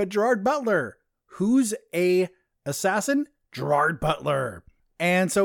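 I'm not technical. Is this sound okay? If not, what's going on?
Yes, I listened carefully and nothing in this recording stood out as a problem.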